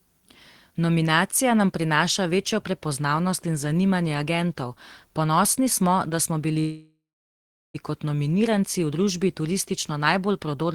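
Packets in the call were likely held up in transit at 6.59 s, draining the jitter buffer and producing a call audio freeze that lasts until 7.76 s. With nothing new to play, the receiver stretches the last sound into a fading buzz or hiss that drops to silence for about 0.76 s of the 1.15 s gap. When the delayed packets land, the speech resumes exactly where it broke off, with nothing lost, now running about 1.15 s later than before.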